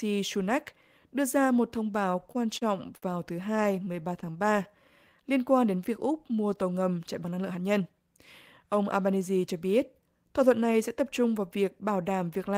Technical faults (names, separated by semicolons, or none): repeated stalls (stutter); jitter buffer slow-down; jitter buffer speed-up